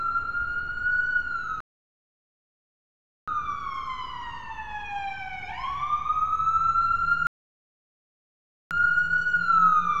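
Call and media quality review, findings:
Rebuffering stall, 1.60–3.28 s and 7.27–8.71 s: hard cut to silence, playback resumes at exactly the cut point, adding 1.67 s and 1.44 s. Player buffer underrun. Unlike a dropout, nothing is skipped; the audio is only delayed.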